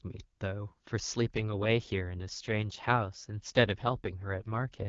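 From 1.34 s to the end, an AMR rate drop pushes the AMR-WB codec into a coarser mode, which fits a fall from 23.85 to 8.85 kbit/s, and the speech turns rough and synthetic. A spectrogram shows no gap or band change, only smeared, blurred harmonics.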